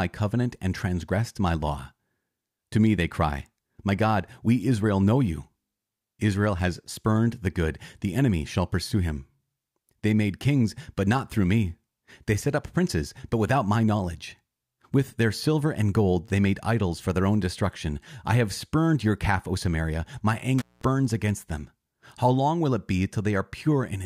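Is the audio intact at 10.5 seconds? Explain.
Yes, the speech at 10.5 seconds is intact, with no audible fault at that point.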